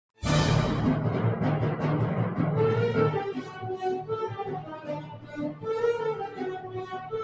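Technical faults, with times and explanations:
Throughout: noise suppressor applied to music or sounds. A suppressor built for speech stayed active and kept treating steady, sustained parts of the sound as noise, pulling them down by up to about 15 dB, so level pumps and thins while sharp onsets still get through.
3.36–3.68 s, 4.28–5.66 s, 6.2–7.13 s: sound cut by the noise suppressor. In each stretch the suppressor judged held or decaying sound as noise and clamped it, dropping it by about 10, 15 and 11 dB respectively, so sustains sink and tails end abruptly.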